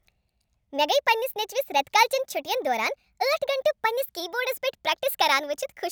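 From the first moment to the last, the speech runs fast and high, the mark of a wrong sample rate. The sound points to material captured at 32 kHz being played out at 44.1 kHz without conversion, so everything moves 1.38 times faster and sits about 5.5 semitones higher, giving a hurried, chipmunk-like quality. On a spectrogram, harmonics and formants sit stretched upward by that ratio; on the waveform, syllables and pauses look compressed in time.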